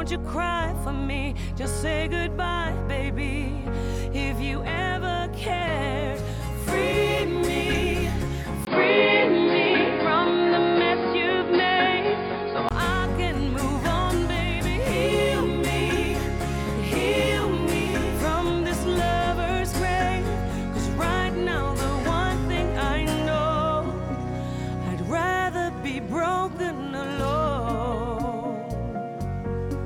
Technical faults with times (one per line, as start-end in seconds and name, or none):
8.65-12.71 input switched to a poorer device